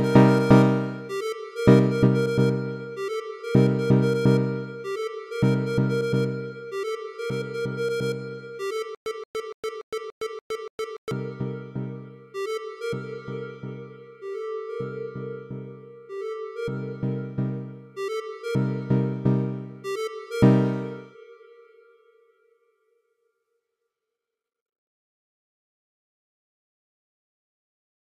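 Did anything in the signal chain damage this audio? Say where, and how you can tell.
Yes, a stutter with silent gaps from 8.95 to 11.11 s: a 176 ms burst repeats 7 times every 288 ms, split by 113 ms of digital silence, likely a stalled playback buffer replaying its last fragment. The waveform shows identical blocks separated by flat silent gaps.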